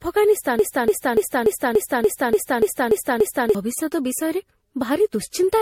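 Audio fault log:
throughout: generation loss. The sound is swirly, smeared and hollow, beyond what one pass of a modest bitrate would give. Consonant attacks blur. Nothing reaches above 16.6 kHz. This likely comes from MP3 encoding repeated about seven times, at rates that fit roughly 64 to 66 kbit/s. Each new pass quantises on a shifted frame grid. Its noise and spectral gaps stack on top of the last pass, so the damage compounds.
0.59–3.55 s: broken-record loop. One 290 ms fragment repeats exactly, back to back, ten times. The stutter is mechanical and rhythmic, with no variation between repeats. The likely cause is a player, encoder or stream that stalled and kept sending the last fragment in its buffer. Whatever should have played in those three seconds is gone, replaced by the loop.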